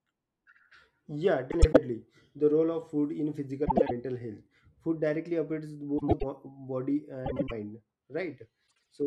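Frames out of order in this speech at 1.51–1.77 s, 3.65–3.91 s (after "role of food in"), 5.98–6.24 s (after "directly affects"), 7.26–7.51 s and 8.67–8.87 s: adjacent blocks of about 105 ms (78 ms at the end) play swapped, giving a garbled flutter and no lost time.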